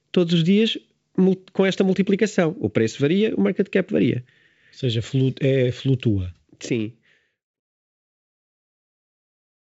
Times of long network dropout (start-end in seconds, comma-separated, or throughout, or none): none